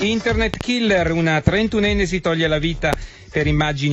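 A loud pop lands as a close double at 0.54 to 0.63 s, then single pops at 1.47 to 1.50 s and 2.93 to 2.95 s, each about 15 dB above the sound, which continues beneath. The likely cause is a voltage glitch from a plug, switch or static. The waveform shows tall, brief spikes, and the spectrogram shows thin full-height vertical lines.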